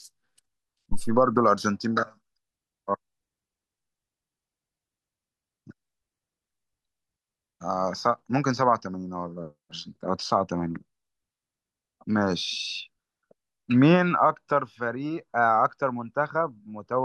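At 0.92 s a deep, low-frequency thump cuts into the speech, peaking at about -14 dBFS and dying away within roughly 95 ms, with a tail running until 1.34 s. This is a phantom power thump: a supply was switched on or off while the input was live, and the sudden voltage step passed through the coupling capacitors into the signal path, where it was heard as a single deep thump.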